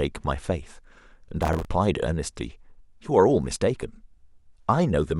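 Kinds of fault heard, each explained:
Processor overload crackle: from 1.43 to 1.65 s, a run of missed deadlines repeats stale audio in short chunks, giving gritty tearing rather than one isolated dropout.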